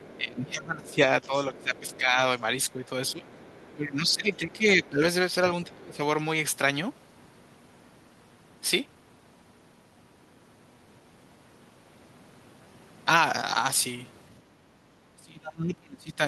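From 0.00 to 5.76 s a second, faint voice sits under the talker, some 25 dB down. This is the other side's voice leaking through, likely loudspeaker echo that the echo canceller left in the microphone signal. On a spectrogram it shows as weak, separate harmonic traces beneath the main speech.

Over nearly the same stretch, 0.16 to 6.0 s, the talker's voice repeatedly sags and thins for about three seconds in total, at worst by roughly 20 dB. This is speech suppressed in double talk, likely the canceller turning everything down while both sides spoke. The waveform shows bitten-out dips, and the spectrogram shows the upper harmonics fading in patches.

Between 14.42 and 14.87 s the room tone drops by about 8 dB for roughly half a second, then recovers. This is background gated by the echo canceller, clamping the microphone while the loudspeaker played. It appears as a short, shallow trough in the noise floor, visible across the whole spectrum.

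From 15.15 to 16.19 s the speech is suppressed in double talk again, this time for about a second and more deeply, roughly 30 dB at worst. The likely cause is the same clash between the talker and the echo. The waveform's envelope collapses in chunks, leaving gaps and missing high end on the spectrogram. Throughout, the call path's upper limit near 12 kHz is visible as a flat ceiling on the spectrogram, which fits Opus at a moderate bitrate.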